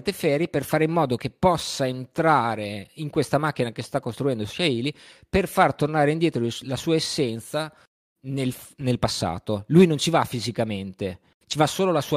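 No technical faults can be heard anywhere in it.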